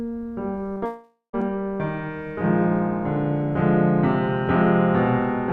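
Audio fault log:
0.73 to 0.83 s, short concealed packet loss: two gaps back to back, about 20 ms then 40 ms of music lost. The decoder continued the last sound over each, leaving a brief smear.
0.85 to 1.35 s, long network dropout: the music turns into a fading continuation of itself, then about 0.12 s of silence. Half a second likely never arrived, and playback resumes past it.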